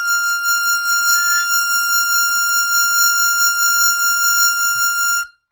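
From start to finish the music carries plainly audible damage, most likely from Opus compression in its music mode at a low rate, consistent with roughly 24 kbps. Bands stay filled with folded or noisy content rather than dropping out, so tones come across grainy and rough, while bandwidth still reaches about 20.4 kHz.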